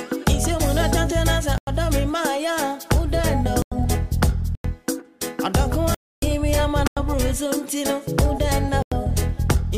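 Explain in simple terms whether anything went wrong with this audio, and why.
Something did go wrong: the sound keeps dropping out into blocks of digital silence. At 1.58, 3.62, 4.55, 6.87 and 8.82 s it vanishes for about 93 ms, and at 5.94 s there's a longer hole lasting until 6.22 s, roughly three of those blocks back to back. Each one starts and stops abruptly. That happens when the program doesn't fill its output buffer in time, and the 93 ms length fits a 4096-sample buffer.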